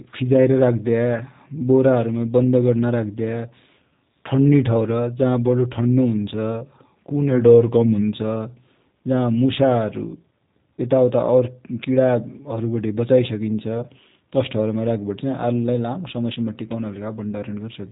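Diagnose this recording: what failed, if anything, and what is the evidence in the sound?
The fault sits at the codec stage: the speech has passed through a G.729 codec across the whole recording. Nothing above 3.8 kHz survives, and the voice sounds plainly rough and synthetic, which fits an 8 kbit/s low-rate coder. Rather than storing the waveform, it resynthesises each frame from a vocal-tract filter, a pitch predictor and a few sparse pulses. On a spectrogram the energy stops at a flat ceiling near 3.8 kHz with nothing above it.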